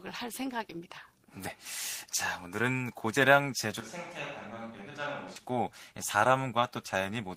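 From 3.80 s to 5.36 s the speech abruptly turns roomy and hollow, with less bass, and drops by roughly 10 dB, with room noise around 30 dB below it. This is likely a switch to a distant microphone after the close one's signal was lost. On the waveform the section shrinks sharply, and a spectrogram shows a weaker low end, reverberant smearing and a raised noise floor, with abrupt edges at both ends.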